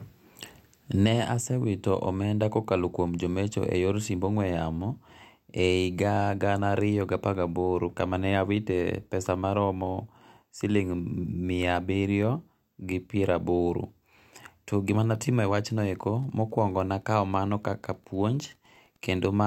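From 15.29 s, just after "to gimane", Wi-Fi interference sets in: the circuit rectifies a nearby radio's 102.4 ms beacon, giving faint, steady ticking well below the speech.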